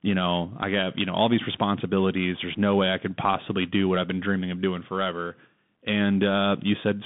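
From start to finish the speech runs through a Bluetooth CVSD headset codec, a one-bit delta scheme at 64 kbps whose adaptive step can't keep up with fast changes. The band sits around 150 Hz to 3.6 kHz with nothing above 3.8 kHz, so it sounds thin and boxy, with scratchy s sounds and grainy hiss underneath.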